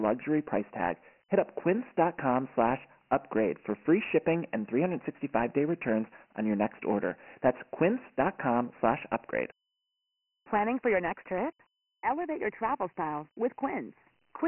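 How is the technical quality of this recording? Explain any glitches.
The recording is poor, with heavy codec damage throughout. From start to finish, the speech carries the signature of Dialogic VOX ADPCM, the 4-bit adaptive format used for phone menus and voicemail. The 24 kbps rate fits 6,000 samples a second, so nothing survives above 3 kHz, and the low end thins out near 200 Hz. Each sample encodes only a coarse step from a predicted value, which produces a gritty, speech-following hiss. That grit rising and falling with the voice distinguishes it from a plain narrowband phone line.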